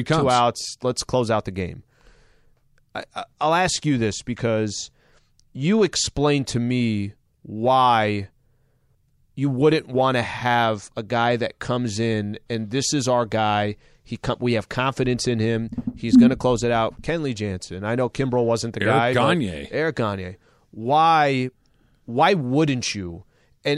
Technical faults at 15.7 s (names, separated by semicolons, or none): none